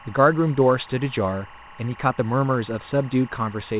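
A steady chirping warble sits behind the speech from start to finish, roughly 25 dB under it, flicking between two pitches near 1 kHz and 2 kHz. That is timecode bleed: linear timecode from an adjacent track or cable has leaked into the audio path. Its rapid, regular texture fits code running at 23.976 frames per second, and it stays audible within the call's narrow band, which stops at 4 kHz.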